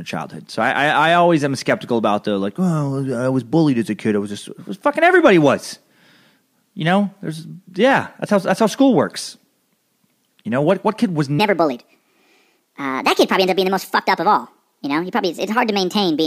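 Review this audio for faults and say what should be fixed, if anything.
After "kid was", 11.39 to 16.26 s sounds hurried and roughly seven semitones high. This section at the wrong speed plays 1.41 times fast, likely from a mismatched clock.

Check that each segment's sample rate matches the project clock before editing and export.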